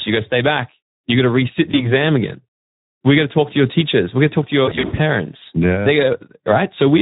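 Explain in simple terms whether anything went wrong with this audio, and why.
Throughout the recording the speech sounds rough, hoarse and a little noisy, as if the voice were being squeezed through a narrow pipe. This is the sound of the Speex codec, an older speech compressor used in internet calls and game chat. It is set to a low-to-middle quality here, so it has too little data to copy the voice's natural texture and rebuilds it only approximately. That approximation is what makes the voice grainy.

There are also two brief stumbles caused by VoIP packet loss concealed by the speech codec. At 1.71 to 1.93 s, right after "got to resit", the voice turns briefly smeared and weak. At 4.65 to 5.00 s, after "going to talk to", it goes buzzy and fades in and out. On an internet call, sound travels in small chunks, and some never arrived. The first dropout sounds like a single chunk of about 20 ms went missing, but the voice takes around 0.2 s to recover. 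The second sounds like roughly 200 ms of chunks was lost in scattered gaps over about a third of a second, with the longest gap about 80 ms. To cover these gaps, the decoder keeps stretching the last bit of sound it received and lets it fade. Because each new chunk builds on the one before, the voice stays distorted for a short while even after chunks start arriving again.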